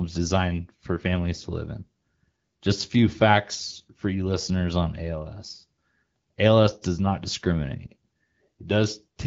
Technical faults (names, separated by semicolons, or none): none